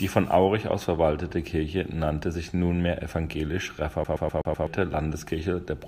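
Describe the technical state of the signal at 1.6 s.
At 1.6 s the speech signal is intact, with no dropout, clipping, glitch or other technical fault at that moment.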